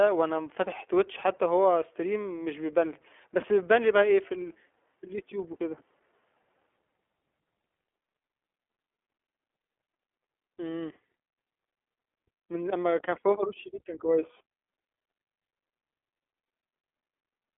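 Speech runs through an iLBC codec for its whole length, with the band held to roughly 300 Hz to 3.4 kHz and nothing above 3.6 kHz. The roughness fits the 15.2 kbps mode's 20 ms frames, each coding its excitation independently, which leaves a plainly audible grainy, synthetic texture. That texture sets it apart from a plain telephone band-limit or G.711 line, which would sound muffled but stay smooth.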